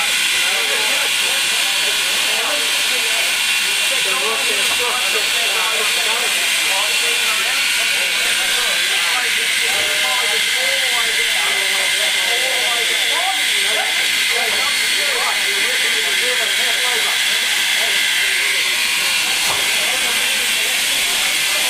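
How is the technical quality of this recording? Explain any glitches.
No glitches or technical faults can be heard anywhere in this recording of everyday sounds.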